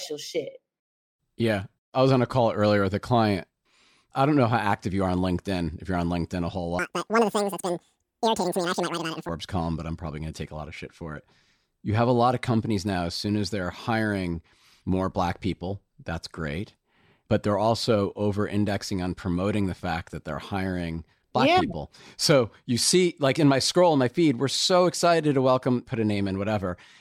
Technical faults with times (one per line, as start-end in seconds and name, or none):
6.79-9.29 audio read two samples at a time (double speed)